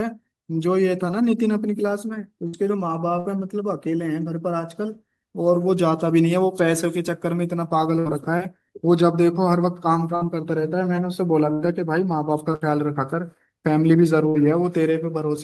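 Bursts of packet loss at 2.47, 3.19, 7.99, 10.15, 11.53, 12.55 and 14.29 s: about 60 ms of the last sound, held and fading, bridges each gap, then speech jumps ahead, unlike a silent dropout.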